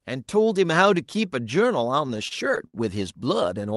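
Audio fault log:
2.07–2.75 s, repeated stalls (stutter): packets arrived late six times, draining the jitter buffer, so the receiver stretched the last sound across about 138 ms, the longest hold 62 ms. Nothing is lost, but the audio drags. On a spectrogram, short smeared horizontal bands interrupt the speech.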